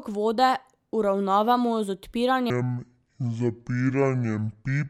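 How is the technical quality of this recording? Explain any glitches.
The recording has one clear fault: a section at the wrong speed. From 2.50 s to the end at 4.90 s, the speech plays at about 0.56 times its original rate. The likely cause is that this portion was clocked or resampled against the wrong rate during editing or playback. Because speed and pitch shift together, the voice abruptly drops by roughly ten semitones and stretches out, sounding deep, slow and dragged compared with the first half.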